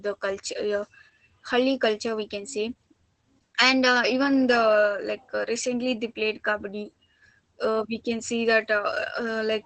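Across the whole speech clip you can hear Opus voice compression at work. Nothing survives above 8.7 kHz, and the SILK coder's coarse excitation leaves the voice muffled, a bit hoarse and faintly robotic, which fits a bitrate around 12 kbps.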